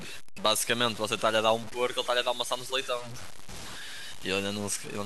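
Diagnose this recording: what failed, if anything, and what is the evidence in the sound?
Sample-format conversion, likely: low bit depth without dither throughout. Grainy distortion follows the speech, fitting truncation to about 6 bits, with error roughly 15 dB down.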